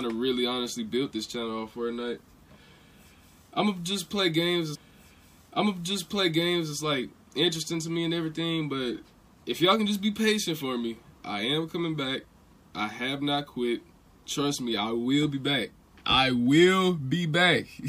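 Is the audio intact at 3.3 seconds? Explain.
Yes, the audio is intact at 3.3 seconds, with no dropout, click, distortion or other fault at that point.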